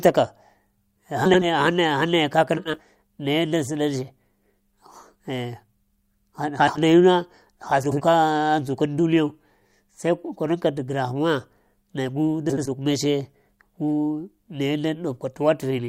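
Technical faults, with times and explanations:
1.25–1.47 s, 2.57–2.80 s, 6.59–6.78 s, 7.83–8.02 s, 12.49–12.68 s: frames out of order. Adjacent 80 ms blocks, which fits runs of four frames, were decoded swapped, so each stretch flutters.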